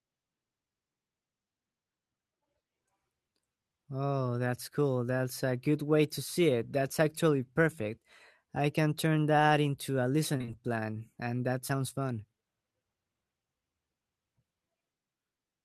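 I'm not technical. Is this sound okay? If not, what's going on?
No. Short concealed packet loss: from 10.37 to 10.50 s, between "turn that into a" and "plan", and again at 11.68 s after "plan and that", bits of the call arrived too late and the receiver patched them by stretching the preceding sound. You hear a brief smear rather than silence.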